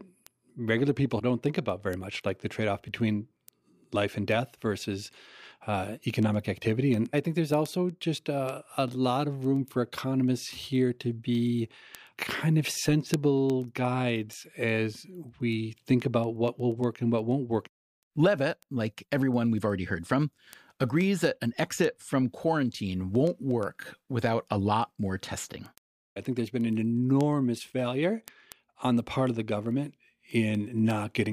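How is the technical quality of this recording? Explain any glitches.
The speech carries a clear timing fault. Word clock ticks run from 0.15 s to 31.26 s: an unlocked receiver clock drifts about 200 ppm, slipping one sample roughly ten times per second, causing around 300 sharp, uneven ticks.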